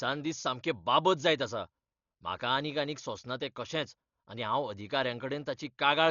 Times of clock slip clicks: none

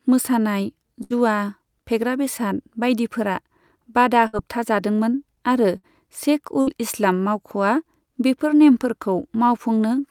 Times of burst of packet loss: 1.03-1.14, 4.27-4.36, 5.77-5.86, 6.61-6.70

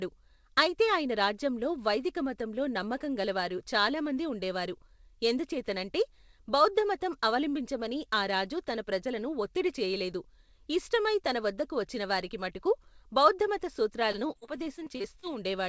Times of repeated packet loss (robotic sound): 14.12-15.25

